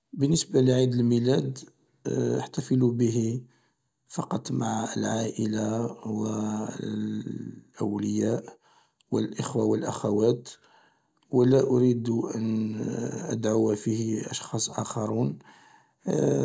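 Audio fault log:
Nothing to log here, as the speech comes through without a single fault to point at.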